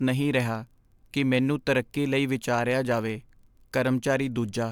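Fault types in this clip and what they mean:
No technical faults are audible in this speech recording; the signal holds steady and continuous throughout.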